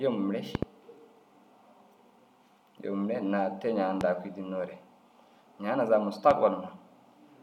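A loud pop strikes three times. The first is a quick double, from 0.55 to 0.65 s. Single pops follow at 4.01 to 4.03 s and 6.31 to 6.33 s. Each jumps far above the speech, which continues underneath. The likely cause is a sudden voltage spike.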